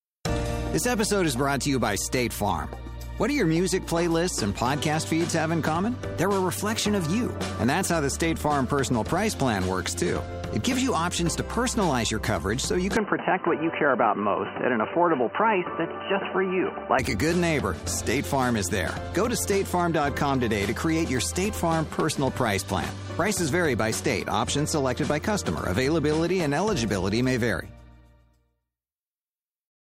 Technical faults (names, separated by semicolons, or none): input switched to a poorer device